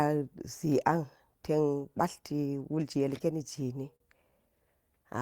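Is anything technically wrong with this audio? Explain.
Yes. Repeated stalls (stutter) run from 3.65 to 4.02 s. Packets arrived late or slower than playback, so the jitter buffer emptied four times in that stretch, and the receiver bridged each gap by extending the last sound, 68 ms in all, the longest hold 44 ms. About 18% of that span is filled this way. No audio is lost, but the speech drags and catches, hiccuping forward in short jerks before resuming normal flow.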